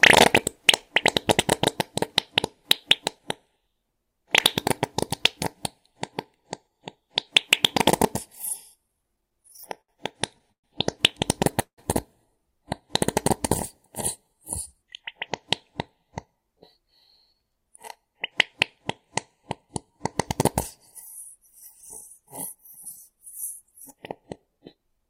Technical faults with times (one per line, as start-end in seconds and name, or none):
8.88-11.80 repeated stalls (stutter)
16.78-19.92 jitter buffer speed-up
21.38-25.06 jitter buffer speed-up